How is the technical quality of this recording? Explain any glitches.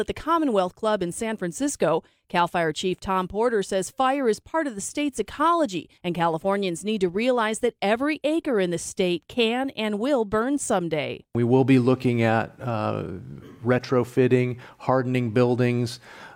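The technical quality of this recording is good, and there are no glitches to explain.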